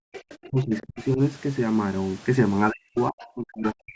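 Speech in which the room background vanishes for roughly 150 ms at the very start, 0.0 to 0.13 s, falling by about 40 dB before returning. This is background gated by the echo canceller, which clamped the microphone hard while the loudspeaker was active. A faint second voice then runs underneath from 0.13 to 1.04 s, about 20 dB below the talker, again from 2.97 to 3.27 s at around 25 dB down, and from 3.67 s to the end at around 15 dB down. This is the other side's voice leaking through, likely echo from the far end that the canceller did not fully remove. Over overlapping stretches the talker dips, from 0.48 to 1.2 s with dips of around 35 dB and from 2.71 s to the end with dips of around 40 dB. This is speech suppressed in double talk, likely because both sides spoke at once and the canceller ducked everything. At 0.80 to 0.86 s a garbled moment comes from chunks out of order: one 32 ms chunk arrived late and plays after the one that should follow it, leaving three hard joins.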